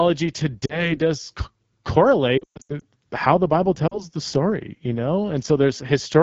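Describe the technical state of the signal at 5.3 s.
At 5.3 s the speech is still passing through the AMR wideband (HD Voice) codec, as it does for the whole clip, at a low rate that fits 8.85 kbit/s. With too few bits for its pulse-driven vocal tract model, the codec makes the voice plainly rough and raspy, with noise-filled highs between 6.4 and 7 kHz.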